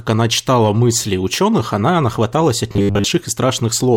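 Robotic sound from repeated short buffers hits this speech clip from 2.72 to 3.06 s: a rigid 100 Hz buzz, likely from a 10 ms chunk replayed in place of most of the missing audio.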